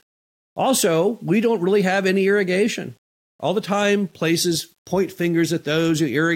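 Low bit depth without dither persists throughout: grit that follows the speech, roughly 45 dB below it, fits the likely rounding to 9 bits without dither.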